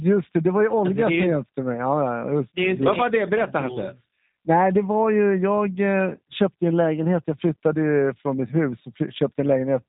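Speech runs through a G.729 codec for the whole clip, and the damage is plainly audible. Everything above about 3.8 kHz is gone, so it has that narrow phone-line sound. The codec doesn't keep the waveform. It rebuilds the speech from a vocal tract model, a pitch predictor and a few pulses per frame, and that leaves the voice rough and a bit synthetic. The roughness fits an 8 kbit/s stream.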